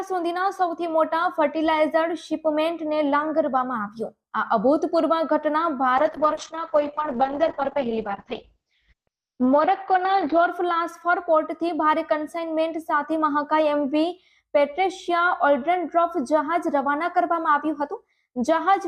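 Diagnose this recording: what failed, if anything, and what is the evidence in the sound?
Call bitrate drop at the codec stage: from 5.98 to 10.53 s, highs vanish above 6 kHz and the sound turns coarse and watery, consistent with roughly 8 kbps encoding.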